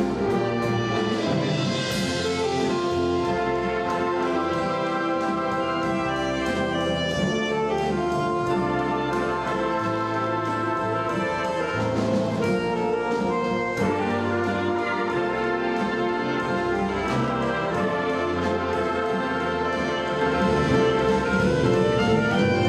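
From 20.21 s to the end, the sound abruptly doubles, with a dry, equally loud copy trailing about a second behind: a doubled audio track, likely from a second out-of-step capture.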